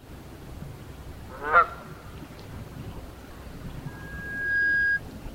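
Loudspeaker feedback squeal runs from 3.86 to 5.02 s in this recording of sounds: a microphone re-amplifies its own loudspeaker until the loop gain passes unity at 1.6 kHz. That tone swells over roughly three-quarters of a second, ending around 10 dB above the sound.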